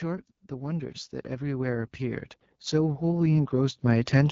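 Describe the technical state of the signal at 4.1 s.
At 4.1 s the automatic gain is still rising, near the end of a swell running from 0.49 to 4.26 s. The control heard a quiet input and kept pushing the gain up, about 15 dB in total, so voice and background climb together. Underneath, the AMR wideband (HD Voice) codec leaves the speech rough and raspy, which fits its 8.85 kbit/s mode. Nothing is present above 7.5 kHz.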